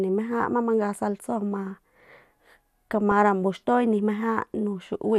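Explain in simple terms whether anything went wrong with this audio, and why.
Something did go wrong: at about 3.11 s there is a brief patch of DAB burbling, a few watery blips over the speech. Weak digital radio reception let a small fraction of corrupted data slip past error correction, so parts of the sound picked up short blips of noise.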